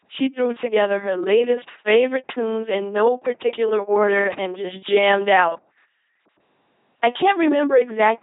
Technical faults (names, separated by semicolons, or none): LPC-10 vocoder; chunks out of order